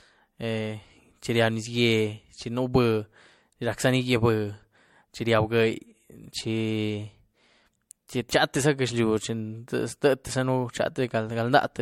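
Generation loss throughout: swirly, hollow speech with blurred attacks and nothing above 16.5 kHz, likely from MP3 re-encoding about three times near 64 kbit/s.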